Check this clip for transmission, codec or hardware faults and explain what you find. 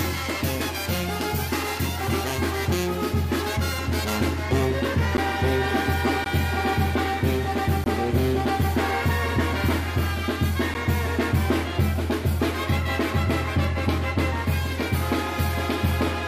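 Four short dropouts to digital silence occur at 5.17 s, 6.24 s, 7.84–7.86 s and 10.74 s, lasting 10 to 20 ms. Each is a block of digital silence, where samples were zeroed, likely from an output buffer not filled in time. The abrupt cuts are heard as ticks or short holes, depending on their length. A waveform shows near-flat runs, and a spectrogram shows blank vertical slots edged by broadband lines.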